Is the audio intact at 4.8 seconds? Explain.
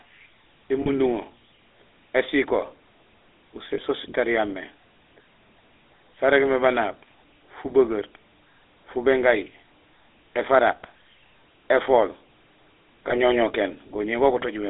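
No. At 4.8 seconds, as throughout the clip, the speech carries GSM full-rate codec damage. The codec models the vocal tract as a filter and excites it with a coarse, regularly spaced pulse train, discarding most of the excitation detail, which fits a 13 kbps stream. The result is a plainly audible buzzy, gravelly roughness, and the sound is confined to a telephone band of roughly 300 Hz to 3.7 kHz.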